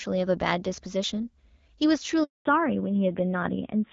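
A speech recording carried over a phone call in which the call was handed from one network to another, and no speech frames arrived during the switch: a handover gap from 2.23 to 2.45 s, about 220 ms, where the sound dies away quickly and leaves silence, with whatever was said in that stretch lost. When the new link starts at 2.45 s, the call has made a fallback to narrowband. Before the switch the sound has the clear, light coding of HD Voice, consistent with AMR-WB at around 12.65 kbit/s. From 2.45 s to the end it points to an older narrowband codec at a low rate such as AMR-NB 7.4 kbit/s, with nothing above 4 kHz, so the sound turns duller and rougher.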